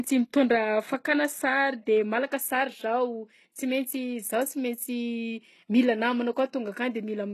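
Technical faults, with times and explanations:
Throughout, HE-AAC compression: the speech carries plainly audible codec damage, and nothing reaches above 12.3 kHz. The s sounds turn gritty and lispy. The treble is likely rebuilt by copying lower bands upward, which fits a bitrate near 16 kbps.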